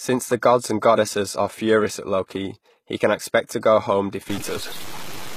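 Right from the start the speech carries HE-AAC compression damage, plainly audible, and the sound is most likely from a low-rate encode around 20 kbps. The top end is synthesized by copying lower bands upward, so s sounds turn gritty and lispy, and nothing reaches above 14.9 kHz.

From 4.30 s to the end at 5.37 s, a digital distortion takes over. That's the signature of a stuck bit, likely one data bit frozen in the converter or line, knocking roughly half the samples off by a fixed amount.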